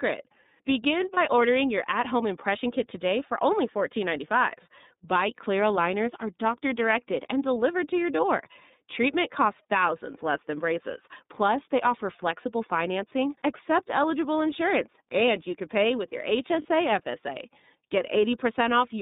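The whole recording passes through the iLBC codec, and the damage is plainly audible. The band is confined to roughly 150 Hz to 3.7 kHz, so sibilants lose their sparkle and the low end is thin. Each frame's excitation is coded on its own, which gives the speech a slightly rough, synthetic grain. A steady hardness like this points to a low-rate frame coder, consistent with the 30 ms mode near 13.3 kbps, rather than to simple band-limiting, which would muffle the sound without adding texture.

At 1.14 s, just before "ordering your at home", one lost iLBC frame leaves a 30 ms gap. The decoder conceals it by repeating the last pitch cycle with added noise, so it sounds like a brief buzzy, held vowel. At 16.62 s, right after "can pay with your", a second single-frame loss of 30 ms does the same. Unlike a dropout, there is no silence, and unlike concealment in codecs that depend on earlier frames, the sound is clean again at the very next frame.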